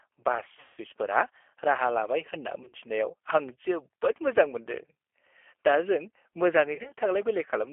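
Throughout, the speech carries the sound of the G.729 codec, most likely the 8 kbit/s G.729A variant. It is confined to a telephone band of about 300 Hz to 3.4 kHz, so the top end is absent and the low end thin. The encoder reduces each short frame to a vocal tract filter, a pitch predictor and a few pulses, and the resulting roughness and synthetic edge are plainly audible.

VoIP packet loss concealed by the speech codec occurs three times. From 0.60 to 0.78 s the decoder fills a continuous gap, which fits about 170 ms of lost audio, by extrapolating from its last pitch and filter state. The sound becomes a stretched, buzzy tone or coloured noise that fades. From 2.63 to 2.76 s and again from 6.75 to 6.92 s, shorter losses are scattered across about 100 ms, with no run longer than about 30 ms. These produce brief smears and weak, distorted stretches, because the decoder needs a moment after the gaps to rebuild its state.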